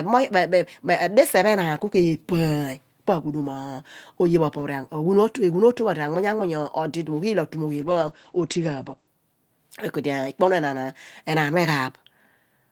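A call bitrate drop runs from 7.85 to 9.19 s. The bandwidth estimate fell, which fits the encoder going from about 32 to 11 kbps. It coded more coarsely for about 1.3 s, and its bandwidth shrank from 20 kHz to 8 kHz, leaving the speech rough and muffled.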